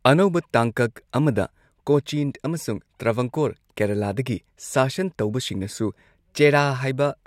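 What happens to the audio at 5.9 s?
At 5.9 s the speech continues cleanly, with no dropout, click, distortion or other fault audible at that moment.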